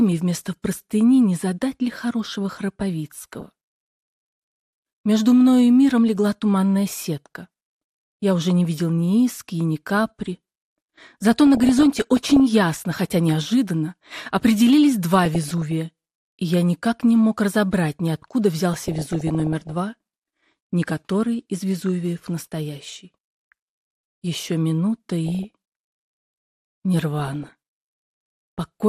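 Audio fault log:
throughout MP2 compression: the sound is dull, with a granular, gurgling roughness that never goes away. This is likely MPEG Layer II coding at a low rate, around 80 kbps. With so few bits, the upper sub-bands get switched off, so the top end drops away. The bands that remain are quantised coarsely, and as their allocation shifts from frame to frame the grain seems to churn.
3.20–3.45 s, 11.47–12.40 s, 15.25–15.72 s, 18.73–19.74 s, 25.27–25.50 s, 27.20–27.53 s DAB burbling: brief bursts of burbling sit over the audio. The longest bursts run past 18.73 s and 11.47 s. Corrupted bits are getting through into the coded stream, which fits a bit error rate of roughly half a percent to one percent. The damaged samples put short blips of noise into single sub-bands, and damaged scale factors make sub-bands jump in level for up to a frame, and that produces the burbling.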